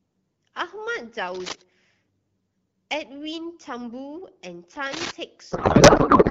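From 1.28 to 1.62 s and again from 4.86 to 5.11 s, dense, uneven bursts of scratching and rustling sit over the speech. The first is roughly as loud as the speech, and the second is about 5 dB louder. This is cable scratch noise, likely from a worn cable or connector being moved so that its contact resistance jumps rapidly. Unlike clicks or dropouts, the speech keeps running underneath, and the noise is irregular rather than tonal or periodic.

From 5.51 s to the end of the clip, the speech is replaced by garbled noise and warble that barely follows it. This is a codec payload misread: octet-aligned AMR frames are being read as bandwidth-efficient, so the decoder finds every field in the wrong place. The AMR-WB coding before this point is clear and fits a 12.65 kbit/s mode. Where scratch noise lies on top of intact speech, here the speech itself is lost.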